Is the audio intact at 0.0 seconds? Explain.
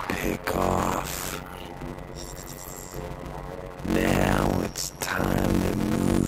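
No. A block size mismatch (padded) runs through the whole clip, including 0.0 s. Short blocks, consistent with 256 samples, are zero-filled to a larger read size, causing a 91.9 Hz buzz and slowing the audio to 0.533 times normal speed at roughly normal pitch.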